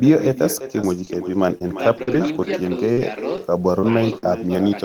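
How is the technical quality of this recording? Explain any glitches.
The technical quality is poor. Two faults affect it: a constant echo and a series of small dropouts.

An echo with no canceller runs through the whole clip. The far end's loudspeaker feeds its microphone, and nothing removes that copy. Each phrase returns around 0.4 s later, about 12 dB quieter. It sounds thin.

Scattered short gaps occur between 0.59 and 4.57 s. There are around ten, and none is longer than about 50 ms. Packets went missing or arrived late, about 240 ms in total. The receiver patched roughly 200 ms by extending the preceding sound. The result is brief ticks and smears.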